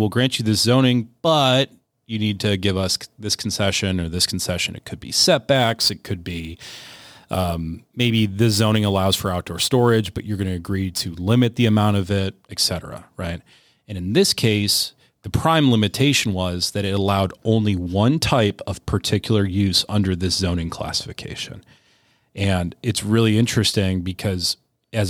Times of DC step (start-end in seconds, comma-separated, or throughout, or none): none